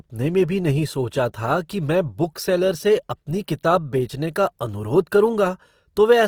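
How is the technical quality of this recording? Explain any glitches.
The recording is clearly degraded by codec damage throughout. Opus compression, likely, across the whole clip: starved bands are refilled with folded or noise content, making the speech grainy and rough, which fits a low rate near 24 kbps.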